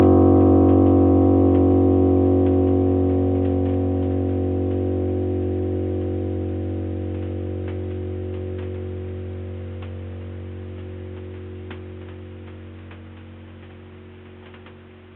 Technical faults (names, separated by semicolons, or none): none